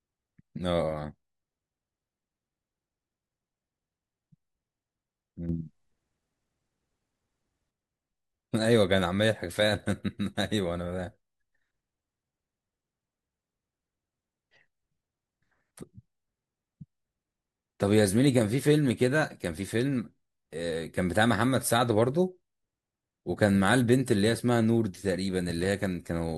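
A speech recording in which the level jumps up by about 7 dB at 5.49 s, voice and background noise together, and drops back at 7.71 s. This sudden gain jump is likely a digital gain setting applied instantly, without a ramp.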